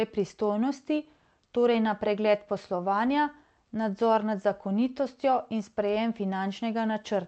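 No technical faults are audible.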